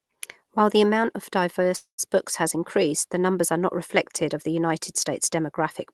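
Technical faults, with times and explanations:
1.77–2.00 s, call audio freeze: the sound stalls and the last bit is stretched into a fading buzz or hiss that drops to silence for about 0.11 s, then carries on where it left off. Nothing's lost, but everything after now runs 0.22 s late. Likely a packet hold-up draining the jitter buffer.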